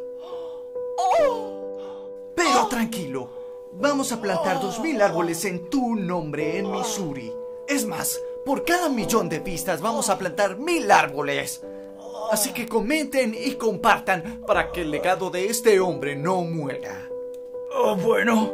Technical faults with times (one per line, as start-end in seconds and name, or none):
0.20-18.50 word clock ticks